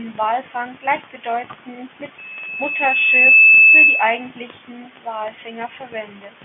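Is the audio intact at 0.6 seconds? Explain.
Yes, the audio is intact at 0.6 seconds, with no fault there beyond the narrow band of the G.711 telephone coding it passes through, which cuts everything above about 3.7 kHz.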